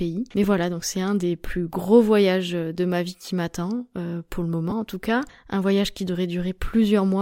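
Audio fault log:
0.43 s, lost LE Audio frames: a 7.5 ms gap just before "voilà donc c'est un", fitting one lost LC3 frame. The decoder refilled it with the previous spectrum under random signs, so voiced harmonics blur into hiss, seen on a spectrogram as a narrow vertical smear.
4.70 s, lost LE Audio frames: between "m'attend euh pour le" and "en tout cas", about 15 ms, likely two frames, was concealed the same way. It gives a brief noisy roughness, visible as a slightly wider smear breaking the harmonic lines, with the waveform's periodicity briefly lost.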